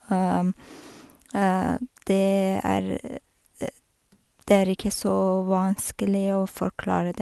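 No technical faults can be heard in this speech, which carries only the ordinary character of a call path, with the top end ending at about 12 kHz in a way that points to an Opus codec at a moderate bitrate near 32 kbps.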